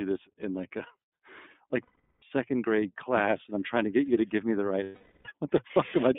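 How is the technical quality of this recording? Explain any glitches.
The recording is clearly degraded. It is narrowband, plainly coded speech with two audible dropouts.

Throughout, the speech sounds thin and slightly rough and synthetic, confined to roughly 200 Hz to 3.6 kHz. This is the iLBC codec, a narrowband VoIP coder working in 30 ms frames, which fits its 13.33 kbps mode. It codes each frame's excitation independently and discards everything above 4 kHz.

From 1.83 to 2.23 s, just before "grade class and I'm", and from 4.83 to 5.26 s, right after "to give me the", the speech turns into a held, buzzy, breathy vowel-like sound that fades. These are lost iLBC frames, gaps of about 390 ms and 420 ms. They fit 13 and 14 missing 30 ms frames, which the decoder concealed by repeating the last pitch cycle mixed with noise. Because each frame decodes on its own, normal speech returns almost immediately after each gap.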